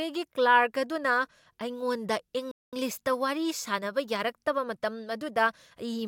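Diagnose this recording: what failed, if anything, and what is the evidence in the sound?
The likely cause is a Bluetooth stall in the wireless playback link: packets to the headphones were held up, the receiving buffer ran empty, and output paused. Just after "ꯑꯗꯨꯅ ꯑꯩꯉꯣꯟꯗ", the speech cuts to silence from 2.51 to 2.73 s, a 214 ms gap, then continues.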